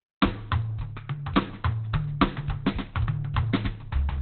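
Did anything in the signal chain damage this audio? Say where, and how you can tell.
Yes. Opus compression damages the music from start to finish. Nothing survives above about 4.3 kHz, so the top is cut to a narrowband ceiling, and the tones sound muffled, hoarse and heavily roughened. That points to the codec stage, likely an Opus encoder starved of bits at a rate around 12 kbps. At that rate it abandons its music mode for its speech-oriented mode, which models the signal as speech and discards the upper band.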